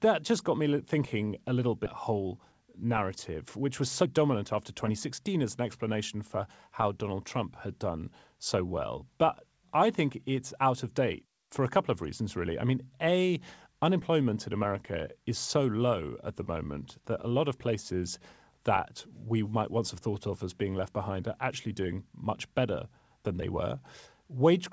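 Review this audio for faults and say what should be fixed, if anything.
A skip ahead occurs from 1.86 to 1.88 s, right after "me thinking a little". About a second of speech is missing. Playback jumps forward with no filler, and the two sides are butted together. The receiver discarded a stretch of audio while later audio was already queued, so the delay suddenly dropped by about a second. Prevent it by letting the jitter buffer absorb bursts instead of flushing, or by concealing the loss.

A jitter buffer speed-up runs from 2.12 to 5.96 s, ending just before "for how". The speech plays at 109 percent speed at unchanged pitch and sounds hurried. The buffer was holding more audio than its target. It trimmed short pitch-period pieces over and over, removing about a third of a second in total. Prevent it by smoothing packet delivery upstream so delayed packets do not arrive in clumps.

The G.722 call path behind both faults is audible as a band limit, with nothing above 8 kHz.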